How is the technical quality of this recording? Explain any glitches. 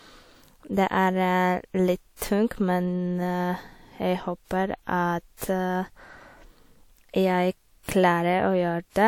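The speech has three pre-echo glitches, at 2.16 to 2.22 s, 5.37 to 5.42 s and 7.83 to 7.89 s. Each time, the transform codec spread its quantisation noise across a block ahead of a sharp attack. That leaves a short hiss of 46 to 53 ms before the onset, and the attack itself sounds smeared.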